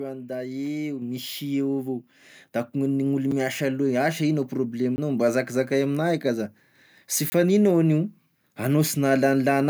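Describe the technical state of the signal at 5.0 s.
Just before 5.0 s, from 4.96 to 4.98 s, the speech drops out in a block of digital silence: a 20 ms stretch of samples was replaced by zeros. The sound cuts straight to nothing and back without any fade, and the whole event comes across as a short tick-like hole.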